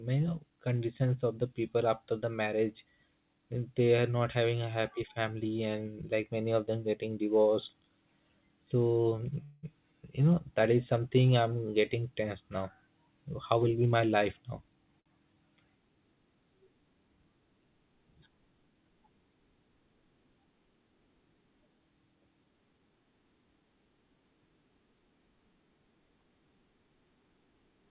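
At 9.44 s the speech suddenly turns into a brief buzzing continuation of the last sound that fades before the talker resumes at 9.65 s, having lost nothing, only picked up about 186 ms of extra delay. That pattern points to a call audio freeze, likely caused by packets held up in transit so the jitter buffer drained and the receiver kept synthesising from the final sound until audio arrived again. From 13.52 to 14.93 s the talking sounds rushed, running at about 111% of normal speed while the pitch stays put. This is a jitter buffer speed-up: after a backlog built up, the receiver trimmed out tiny slices of one or a few pitch periods again and again, shedding roughly 150 ms to bring the delay back down to its target. Right after, from 15.00 to 15.08 s, one sound is held slightly too long with a faint buzzy dip, then the speech carries on from exactly where it paused. That is a short stall from a late packet, where the buffer ran dry and the receiver stretched the last sound for about 59 ms until the packet showed up. 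Throughout, the audio is narrowband with nothing above 4 kHz, as expected from a call path using a codec such as G.711 mu-law.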